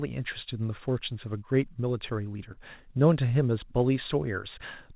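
At 2.52 s to 2.58 s there is a short concealed packet loss: about 40 ms of the speech did not reach the decoder in time, and the receiver covered the gap by extending the preceding sound for roughly 43 ms before cross-fading back into the real signal. It registers as a brief smear or wobble in the speech. The telephone-band audio, with nothing above 4 kHz, points to a narrowband call codec such as G.711.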